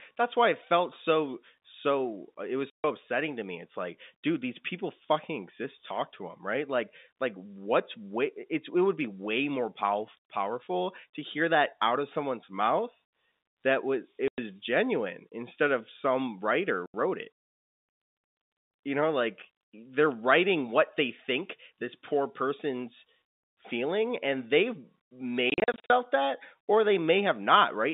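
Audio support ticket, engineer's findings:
Packet loss filled with silence, four events:

2.70–2.84 s: 140 ms hole just before "upsetting to me".

14.28–14.38 s: 100 ms gap between "was it" and "genuine instead of some".

16.86–16.94 s: 80 ms dropout right after "instead of some writer".

25.5–25.9 s: a cluster of short gaps totalling 240 ms across 400 ms, each no longer than 40 ms.

Probable component: network transport and receiver buffer. Every hole length is a multiple of 20 ms, which fits 20 ms packets. The receiver inserted digital silence in place of the missing packets, with no concealment.

Waveform: flat silent blocks with vertical edges.

Spectrogram: blank columns through the whole band. The surrounding audio is confined to roughly 200 Hz to 3.7 kHz by the G.711 telephone coding path.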